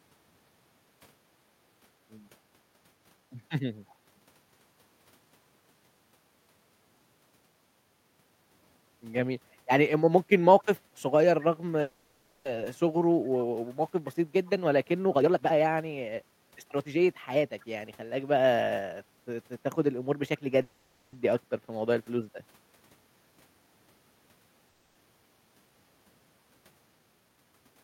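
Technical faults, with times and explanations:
2.39–2.53 s, background gated by the echo canceller: the room sound dips by about 6 dB for roughly 150 ms and then comes back. While the far side was playing through the loudspeaker, the echo canceller pulled the microphone level down hard to keep that playback from being sent back. When it released, the background returned, so the ambience briefly sinks rather than fading naturally.
3.89–3.95 s, echo leak: a faint, delayed copy of the sound appears, about 35 dB below the speech and trailing it by 256 ms. The likely cause is a loudspeaker-side echo canceller that did not fully remove what its microphone picked up from the loudspeaker, so a scrap of that pickup was sent back down the line. At that low level and short length it registers as a brief ghost.
11.81–12.47 s, 20.62–21.15 s and 24.69–24.97 s, call audio freeze: the sound stalls and is carried on as a sustained tail of the last moment, for 640 ms, 510 ms and 260 ms respectively, with no true silence. 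Each time, the audio then resumes exactly where it stopped, with nothing skipped, so each stall adds that much delay. This is most likely packets held up in transit leaving the jitter buffer empty until they arrived.
15.05–18.09 s and 26.92–27.53 s, jitter buffer speed-up: the audio runs fast at unchanged pitch, about 121% speed in the first stretch, removing roughly 700 ms, and 113% in the second, removing about 100 ms. The buffer had built up more audio than its target, so the receiver repeatedly cut out short pitch-period-sized pieces to reduce the delay, which makes delivery sound hurried without raising the pitch.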